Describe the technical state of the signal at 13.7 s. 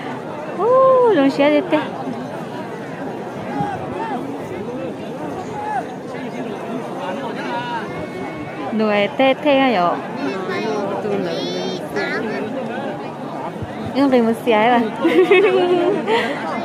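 At 13.7 s the signal is intact, with no audible technical fault at that moment.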